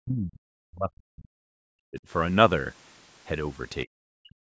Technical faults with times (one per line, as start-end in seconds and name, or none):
0.00-2.06 speech suppressed in double talk
3.85-4.50 speech suppressed in double talk